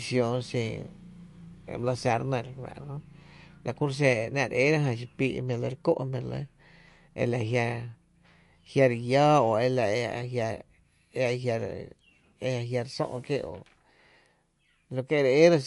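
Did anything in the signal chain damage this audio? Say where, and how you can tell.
Yes, at the codec stage, and it runs through the whole speech clip. Nothing comes through above 11.3 kHz, so the top end sounds sliced off flat, and the s sounds have a watery, swirly quality where weak high detail flickers in and out between frames. That's likely MP3 compression starved of bits, which fits a low bitrate around 48 kbps: the encoder drops the treble and zeroes quiet frequency lines to save data.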